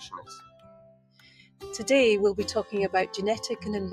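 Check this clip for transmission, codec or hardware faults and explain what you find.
There's a processing fault here rather than a transmission glitch: a noise suppressor meant for speech is active on the whole clip.

Noise suppressor applied to music or sounds: across the entire clip, the suppressor treats sustained and ambient parts of the sound as noise and pulls them down, with the level swinging by something like 15 dB. Sharp onsets get through mostly intact, but anything held or decaying gets ducked, so you hear pumping and a thinned-out body as the gain keeps riding up and down.

Sound cut by the noise suppressor: from 0.05 s to 1.63 s the suppressor clamps down harder than elsewhere, reaching about 18 dB of attenuation at its deepest and hitting roughly a second and a half of material in total. The steady, lingering portions sink noticeably and their tails get chopped short, while the more abrupt parts still poke through. 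That leaves this opening stretch sounding hollow and gated.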